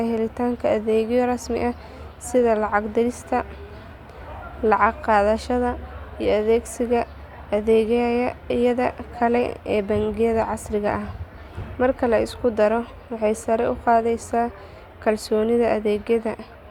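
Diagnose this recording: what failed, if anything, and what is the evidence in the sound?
Nothing failed; no fault can be heard anywhere here.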